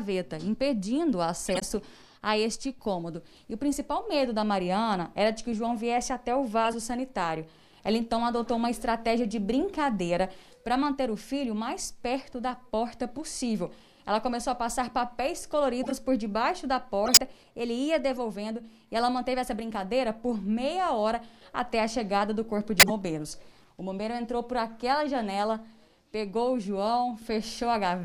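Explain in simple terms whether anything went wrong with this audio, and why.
Something did go wrong: six short bursts of corrupt frame decoded, at about 1.46, 6.65, 15.83, 17.05, 18.11 and 22.79 s, each lasting under a fifth of a second. Damaged bits in a handful of compressed frames were played anyway, so the decoder put energy in the wrong places and you hear brief squeaks or noisy blips over the sound. The ones near 17.05 and 22.79 s stand out most.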